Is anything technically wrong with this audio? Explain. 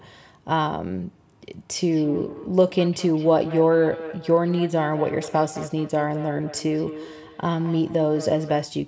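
Yes, there's feedback echo between two devices running from about 1.77 s to 8.72 s. Two devices in the same room are on the call, and one is playing back what the other's mic sent, so that mic hears it again. Each echo canceller only removes its own device's playback, so the loop survives. You get speech coming back roughly every fifth of a second, thinner and ringier, peaking about 14 dB under the direct speech, on top of the call's normal band-limiting to 8 kHz.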